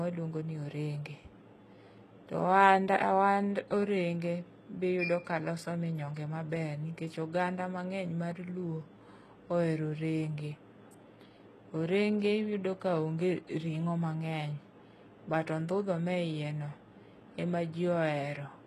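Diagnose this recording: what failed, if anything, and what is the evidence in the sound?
The treble of the speech sounds bright but synthetic for the whole clip: s sounds come out gritty and lisping, with a metallic sheen over the upper band, and nothing at all is present above about 12.3 kHz. This is likely HE-AAC compression at the codec stage. The encoder kept only the lower spectrum and regenerated the top by copying lower bands upward under a coarse envelope, so harmonics misalign across the crossover. The damage is plainly audible and fits a very low bitrate, around 16 kbps.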